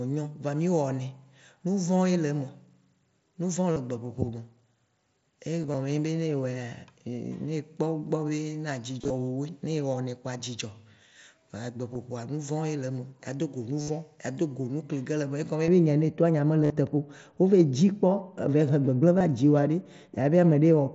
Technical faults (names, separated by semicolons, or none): concealed Bluetooth headset packet loss; de-emphasis applied wrongly